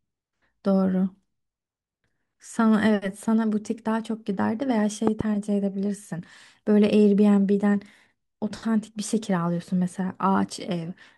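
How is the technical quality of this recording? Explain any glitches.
One fault stands out in the speech recording. Loud pop, 5.07–5.23 s: a double pop, likely from a voltage spike such as static or a switch, jumps well above the speech, which continues underneath.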